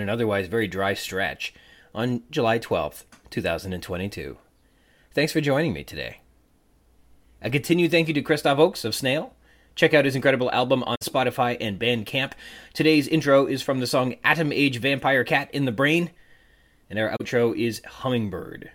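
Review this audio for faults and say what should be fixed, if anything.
AAC frame loss with muting occurs twice in the speech. A soft-edged gap opens at 10.95 to 11.02 s, about 64 ms, which fits three lost frames. A shorter one follows at 17.16 to 17.21 s, about 43 ms, consistent with two frames. The decoder zeroed the missing spectra. Overlapping windows fade the sound out and back in. Adding error resilience or retransmission to the transport would prevent these dropouts.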